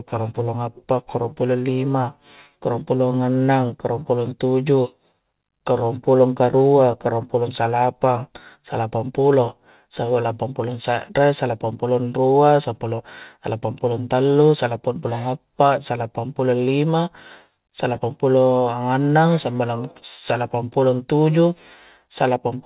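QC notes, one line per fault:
No faults found in this speech clip.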